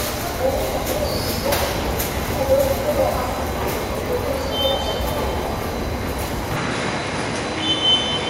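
Input switched to a poorer device, from 6.57 s to the end of the clip: the sound turns duller from that moment, with nothing left above 10.8 kHz, and a faint new background noise sits well below the signal. There is no gap at the change and the level stays about the same. The likely cause is the recording input moving to a different, narrower-band microphone, which brings its own tone and noise floor.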